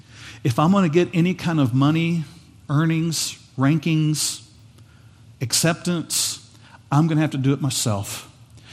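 MP2 compression runs through the whole speech recording, which sounds dull and gurgling, likely from Layer II coding at a rate around 80 kbps that switches off upper sub-bands. DAB burbling hits at 5.61 s: a brief burst of noise blips in single sub-bands where bit errors, a small fraction of a percent, corrupt the audio data across a few frames.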